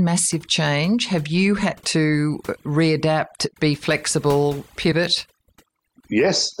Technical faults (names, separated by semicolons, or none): overdone noise removal; compressed frames skipped